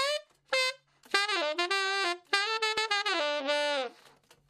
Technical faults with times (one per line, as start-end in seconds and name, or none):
2.78 overlap between stream segments